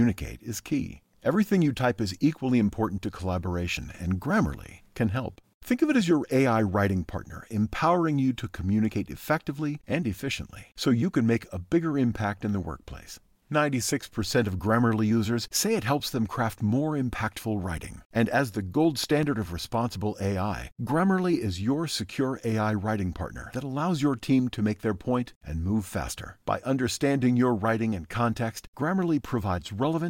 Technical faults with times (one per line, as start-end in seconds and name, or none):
18.46-19.61 CD scratch ticks